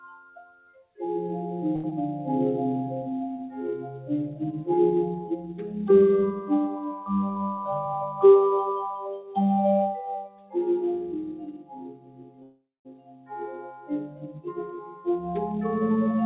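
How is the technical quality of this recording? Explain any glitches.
The quality is poor. A speech-style noise suppressor fights the sound throughout, and the call link adds several timing glitches. The audio passes through a G.711 mu-law call path, so nothing above 4 kHz comes through.

A noise suppressor applied to music or sounds stays active for the whole clip. It treats steady tones and decaying tails as noise. Its gain swings by roughly 15 dB, so the level pumps and held sound thins while attacks survive.

The sound is cut by the noise suppressor at six points: 0.1–0.99 s, 5.21–5.72 s, 9.17–9.37 s, 10.18–10.55 s, 11.5–14.52 s and 14.75–15.07 s. The suppressor judged these passages to be noise. They sink by about 7 to 18 dB, and tails end abruptly.

A short stall from a late packet runs from 1.76 to 1.86 s. A packet arrived late and the buffer ran dry. The receiver stretched the last sound for 76 ms, then resumed where it stopped. 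The result is a brief held moment with a slight buzz or dip and nothing lost.

A short concealed packet loss sits at 1.90–1.93 s. About 40 ms never arrived in time. The receiver extended the previous sound for 14 ms and blended back into the real audio. It is heard as a quick smear or wobble, and a small piece of sound is gone.

A jitter buffer speed-up occurs at 7.57–8.58 s and at 15.56–16.22 s. Too much audio had piled up, so the receiver trimmed tiny pitch-period slices to cut the delay. Playback runs at 106% and then 107%, removing about 70 ms and 50 ms. The pitch stays the same, but the sound feels hurried.

A call audio freeze interrupts the sound from 12.43 to 12.87 s. The last sound is continued and fades, and about 210 ms of silence follows before playback resumes. In total 420 ms is inserted and nothing is lost. The likely cause is delayed packets emptying the buffer.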